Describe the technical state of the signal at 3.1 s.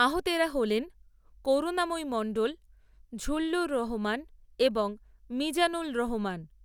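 At 3.1 s the speech signal is intact, with no audible technical fault at that point.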